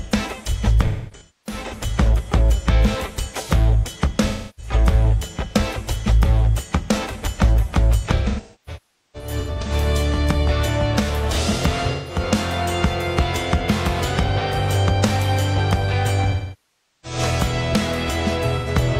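AAC frame loss with concealment strikes at 0.86–1.74 s, 4.28–4.72 s, 8.16–9.72 s, 11.92–12.19 s, 16.31–17.19 s and 18.57–18.68 s. Missing frames are rebuilt from the last good spectrum, leaving smeared, phasey patches. The longer unbroken gaps, about 0.3 s, 0.4 s and 0.73 s, sag toward silence before recovering.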